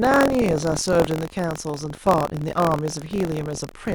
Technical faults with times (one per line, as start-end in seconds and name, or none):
0.00-3.94 buffer tearing